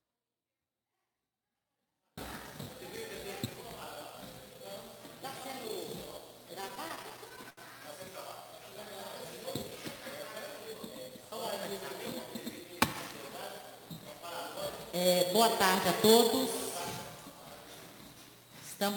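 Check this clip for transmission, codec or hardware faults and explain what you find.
Two faults are audible: a dropout at the very start and a burst of stutter a few seconds later.

From 0 to 2.18 s the audio is already in an audio dropout to a faint residue. Only a faint leak remains, roughly 35 dB below normal level, then the full signal returns abruptly. The likely cause is loss of the wanted signal while the downstream path stayed live.

Between 6.61 and 7.60 s there are repeated stalls (stutter): about a dozen short holds, the longest 72 ms, together 178 ms. The jitter buffer kept running dry, and the receiver extended the last sound each time. Nothing is lost, but the audio drags and catches.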